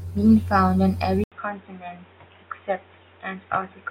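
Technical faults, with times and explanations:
1.24–3.90 s, input switched to a poorer device: after an 80 ms gap, speech turns dull, quieter and faintly noisier, with nothing above 3.8 kHz. Likely a narrower-band microphone took over.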